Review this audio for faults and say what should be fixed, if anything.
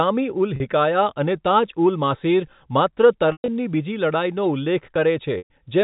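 A brief buzzy hold at 0.56 to 0.60 s, and longer held-then-fading gaps at 3.32 to 3.48 s and 5.38 to 5.50 s, come from packet loss with pitch repetition: the receiver replays the last pitch period to cover the lost 40, 140 and 120 ms. The G.711 telephone coding is audible only as the usual 4 kHz telephone band. Preventing this needs a steadier network path, plus forward error correction or a larger jitter buffer, so that packets arrive intact.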